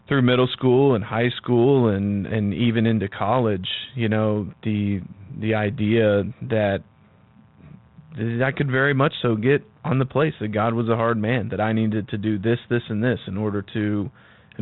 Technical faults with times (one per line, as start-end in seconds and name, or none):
7.85-7.87 bit errors on an ADPCM link